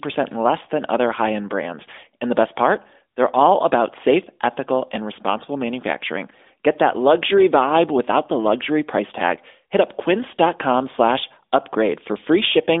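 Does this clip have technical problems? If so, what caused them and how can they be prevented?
No, no technical faults here.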